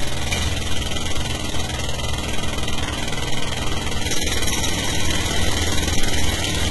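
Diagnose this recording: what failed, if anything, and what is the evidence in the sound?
Throughout, the top end sounds gritty and metallic, with nothing above about 11.8 kHz. The likely cause is HE-AAC compression at a low rate, around 16 kbps, with the treble copied up from lower bands.

From 1.36 to 1.72 s there is an irregular burst of scratchy crackle. This is loose connector crackle in the analogue wiring: a worn contact rapidly making and breaking the signal.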